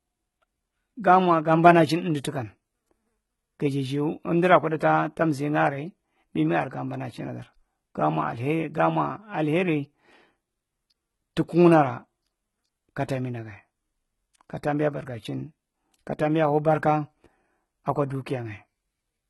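From start to finish the speech carries heavy HE-AAC compression damage, likely from that codec at a low rate, and the sound fits a bitrate around 16 kbps. Only the lower band is really coded. The treble is rebuilt by copying lower bands upward, so it stays bright but doesn't match the real harmonics. The s sounds come out gritty and lispy, with a metallic sheen, and nothing at all survives above 11.8 kHz.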